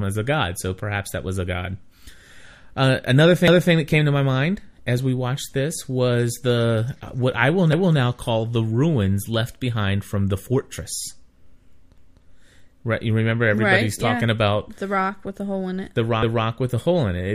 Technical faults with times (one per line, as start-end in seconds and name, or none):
3.48-3.73 overlapping chunks
7.73-7.98 overlapping chunks